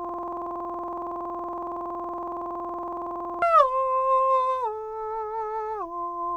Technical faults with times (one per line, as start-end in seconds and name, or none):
0.00-3.42 system hang loop